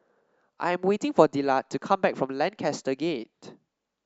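No technical faults can be heard anywhere in the speech.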